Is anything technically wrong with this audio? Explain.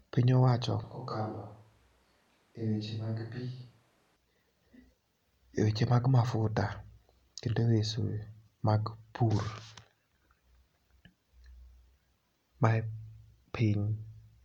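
Yes. From 0.84 to 4.16 s the speech abruptly turns hollow, roomy and thinner in bass, around 10 dB quieter with audible background noise. This is likely a switch to a distant microphone. Unlike a plain gain drop or filter, the room sound itself changes, and it switches back suddenly.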